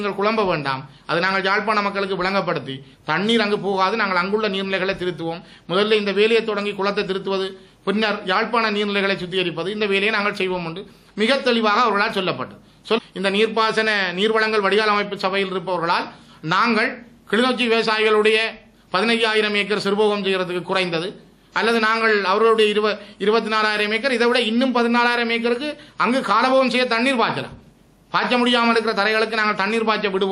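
Nothing in the recording stood out as a technical problem on listening.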